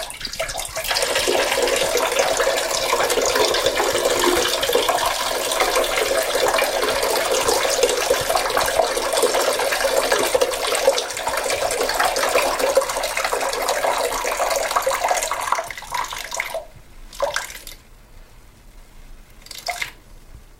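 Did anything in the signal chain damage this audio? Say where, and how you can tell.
Yes. Sharp single clicks at 6.15, 10.11 and 15.56 s point to dropped samples, likely at the driver or buffer stage. A fraction of a millisecond goes missing, so the waveform jumps abruptly to a later value, leaving a thin vertical line on the spectrogram.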